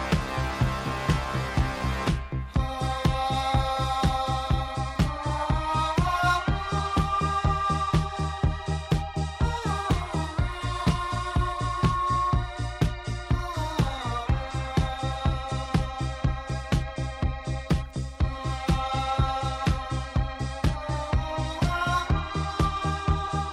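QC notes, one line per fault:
10.90–12.53 s: loudspeaker feedback squeal. A single 1.1 kHz tone swells over about a second to roughly the level of the sound, as the microphone-to-speaker loop's gain exceeds one there. Unlike a steady interfering whistle, it grows by itself from nothing.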